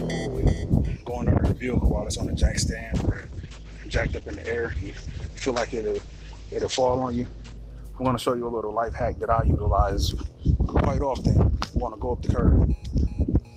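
From 2.96 to 7.69 s a call bitrate drop leaves coarse, watery coding and cuts everything above 8 kHz, unlike plain filtering, which stays clean.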